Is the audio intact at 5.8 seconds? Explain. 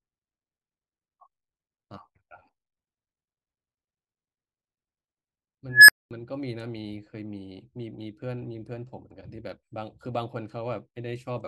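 No. An unstable filter takes over from 5.69 to 6.11 s. A recursive filter's output runs away, so a tone around 1.5 kHz swells over about 0.19 s into a loud squeal and clips. Then the output overflows and cuts to silence for about 0.22 s.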